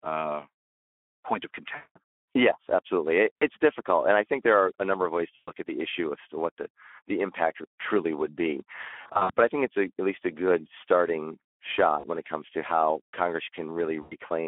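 Speech that sounds noisy and hoarse throughout, confined to a 250 Hz to 3.4 kHz telephone band, is the mark of the Speex codec at about 11 kbps starving the excitation of bits. Six dropouts stretch into a fading buzzy or coloured-noise smear: at 1.75 to 1.98 s after "point of" (200 ms lost), at 3.38 to 3.43 s, at 5.35 to 5.52 s between "a number of ways" and "at the issue as", at 9.01 to 9.31 s between "impact truly would be" and "but I think it's" (losses scattered over 280 ms, longest run 60 ms), at 11.99 to 12.05 s and at 14.01 to 14.15 s. These come from VoIP packet loss concealed by the speech codec, which extrapolates the last pitch and filter while its gain decays.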